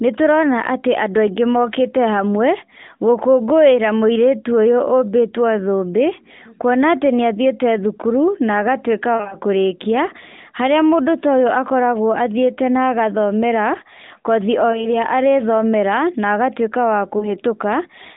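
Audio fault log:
9.16–9.35 s, 14.72–14.89 s after "na agathomera kothi o", 17.18–17.37 s: lost AMR speech frames. The decoder repeats the last good settings at falling gain. This causes short dips and warbles, none longer than 40 ms.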